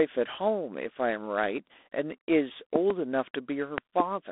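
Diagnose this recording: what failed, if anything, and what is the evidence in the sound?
Codec stage: G.726 ADPCM, with the harsh, rasping hiss suggesting the 24 kbit/s mode. Too few bits per predicted difference leave quantisation noise that rises and falls with the speech. The band runs from 250 Hz to 3.6 kHz, with nothing above 3.8 kHz.

Loud pop, twice, each a pair of sharp pops about 20 dB above the speech: 2.76 to 2.93 s and 3.78 to 4.02 s. The speech carries on underneath. The likely cause is a voltage step in the analogue wiring, such as a plug or switch contact, shaped by later circuits.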